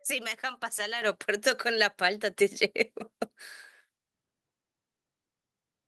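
At 1.02 s the speech and the background noise behind it jump louder together, by about 8 dB, and at 2.04 s they rise again by about 3 dB. Each is a microphone volume step-up: the call software judged the input too quiet and raised the device's gain in one step.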